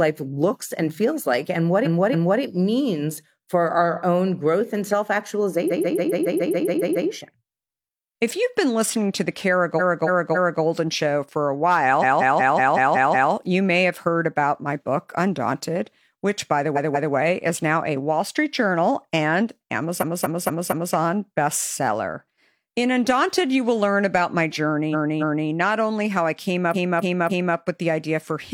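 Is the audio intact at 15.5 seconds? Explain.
Yes, the speech at 15.5 seconds is intact, with no dropout, click, distortion or other fault at that moment.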